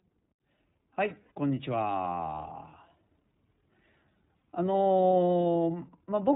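The whole clip is coded with the iLBC codec. It is narrowband, so nothing above 4 kHz survives. The speech is intelligible but plainly rough and synthetic. The texture fits 30 ms frames at about 13.3 kbps, each coded on its own.

From 1.23 to 1.32 s there are lost iLBC frames. The decoder fills the 90 ms gap by repeating the last pitch cycle with added noise. It sounds like a held, slightly buzzy vowel. The length fits three lost frames. The speech recovers at once afterwards.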